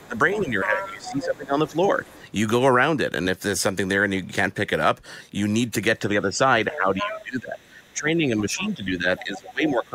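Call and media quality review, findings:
Other side's voice leaking through. Far-end speech audible under the talker at 0.0–1.25 s (about 15 dB down), 2.04–2.14 s (faint), 6.73–7.22 s (nearly as loud, about 5 dB down), 7.85–7.92 s (faint), 8.64–9.7 s (about 20 dB down). Likely residual loudspeaker echo the canceller missed.

Speech suppressed in double talk. Talker level pumps down during overlap, 0.0–2.22 s and 5.99 s to end, dips up to roughly 15 dB. Around one and a half and three seconds affected. Likely echo canceller attenuating both voices together.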